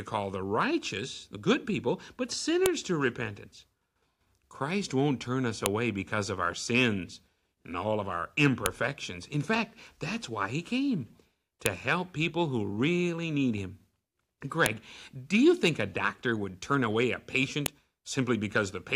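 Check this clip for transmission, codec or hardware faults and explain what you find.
One fault recurs through this speech: a file header played as audio, with sharp clicks at 2.66, 5.66, 8.66, 11.66, 14.66 and 17.66 s. Joined 3 s pieces kept their header bytes, which play as samples. Unlike packet-loss clicks, these land exactly every 3 s regardless of the speech.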